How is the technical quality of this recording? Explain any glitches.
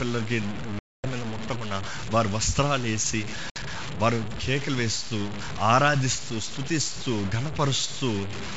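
The recording has two clear faults: constant grainy distortion and two dropouts.

Throughout the speech there is gritty distortion that tracks the signal and sits only about 10 dB below it. This is likely low bit depth without dither, consistent with truncation to about 5 bits.

At 0.79 to 1.05 s (250 ms) and 3.50 to 3.58 s (60 ms), packet loss on an ADPCM call cuts hard-edged silent holes. Afterwards the decoder's predictor and step size are out of step, so the speech returns slightly distorted before settling.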